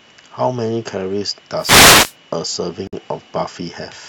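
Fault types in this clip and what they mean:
wireless microphone noise hit: The analogue FM radio link from the microphone faded as reflected signals cancelled, so receiver noise rose into the audio. From about 1.57 to 2.15 s a swishing burst of static surges up over the speech.
gap at a join of encoded pieces: Separately encoded segments were joined without trimming each encoder's start delay or final-frame padding. At about 2.87 s a silence of about 54 ms cuts into the speech, with smeared edges, before it carries on where it stopped.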